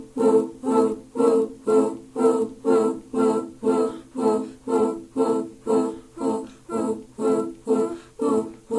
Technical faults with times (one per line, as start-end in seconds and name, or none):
0.00-8.79 resampler restarted on every block